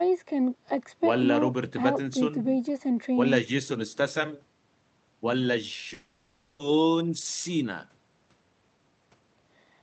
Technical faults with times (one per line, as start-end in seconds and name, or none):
5.93-6.61 long network dropout
8.36-9.80 jitter buffer speed-up